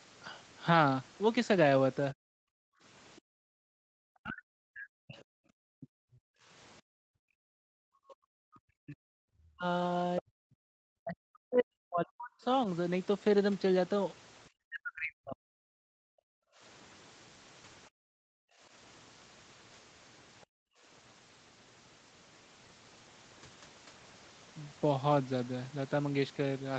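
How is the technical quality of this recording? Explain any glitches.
The recording has clear echo-canceller problems. The talker's level collapses repeatedly, the background drops out several times, and faint traces of a second voice appear. The audio stops at about 8 kHz, as expected for a call path.

Speech suppressed in double talk, 2.13 to 16.34 s: the talker's voice repeatedly dips, thins or breaks up for roughly seven seconds in total, at worst falling around 40 dB. The likely cause is the echo canceller mistaking the talker for loudspeaker echo while the far side spoke, and turning both down.

Background gated by the echo canceller, at 2.45 to 3.65 s, 6.82 to 7.45 s, 10.70 to 10.74 s and 17.89 to 20.83 s: the room sound suddenly drops away, by about 40 dB at its deepest, then returns. The canceller clamped the microphone hard while the loudspeaker played, then released it.

Other side's voice leaking through, from 3.16 to 5.21 s and briefly at 20.41 to 20.46 s: a faint second voice can be heard, roughly 35 dB below the talker. 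It is likely loudspeaker playback that the echo canceller failed to remove completely from the microphone.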